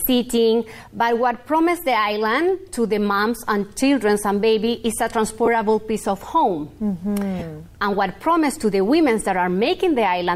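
At 5.46 to 5.48 s and again at 7.39 to 7.42 s, lost LE Audio frames leave brief noisy smears, which fits two and then three missing frames. The LC3 decoder refilled each gap with repeated, sign-scrambled spectrum, so the sound blurs rather than dropping to silence or clicking.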